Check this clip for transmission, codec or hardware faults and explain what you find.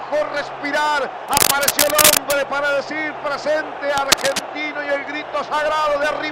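There is a hardware fault. Cable scratch noise occurs at 1.27–2.38 s, noticeably louder than the sound, and at 3.97–4.48 s, roughly as loud. It is likely a worn connector whose contact resistance flickers, producing crackling rustle that shows as dense broadband speckle on a spectrogram and ragged spikes in the waveform.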